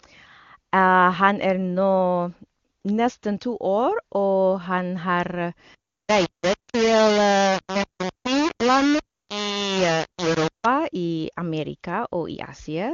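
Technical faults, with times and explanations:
5.75–10.66 s, low bit depth without dither: the speech turns harsh and gritty, with quiet stretches sputtering or dropping out, likely from rounding to about 3 bits with no dither, leaving error roughly as loud as the signal. A spectrogram shows broadband grain tracking the speech; the waveform shows coarse stair-steps.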